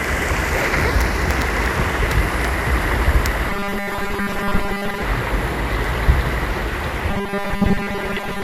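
Robotic sound from repeated short buffers runs from 3.50 to 5.02 s and again from 7.11 s to the end, most likely because fresh audio reached the playback software too seldom and it kept replaying its last 5 ms chunk to fill the gaps. During these spans most of the real material is skipped. The constant looping stamps a fixed 200 Hz pitch onto the sounds, giving them a stiff, metallic buzz that only loosely follows their original shape.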